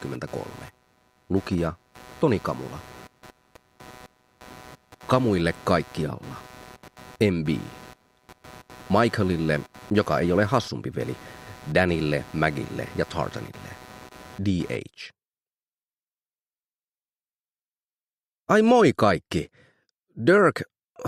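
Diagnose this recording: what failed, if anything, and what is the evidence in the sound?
Analogue wiring: computer activity noise, with load swings on the shared ground adding a pulsing buzz near 150 Hz, roughly 25 dB down, from 0 to 14.76 s.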